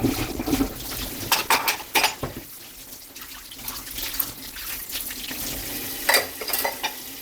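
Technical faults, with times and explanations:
0.0 to 5.72 s, adaptive stream starting at a low bitrate: the sound begins dull and smeared, with the treble missing or artificially filled in and strong codec artefacts, then sharpens abruptly at 5.72 s with no gap or silence, which fits an Opus stream around 16 kbit/s stepping up to 64 kbit/s once the player had measured the connection. The seamless jump to better quality distinguishes it from a rebuffering stall or a bandwidth limit lasting throughout.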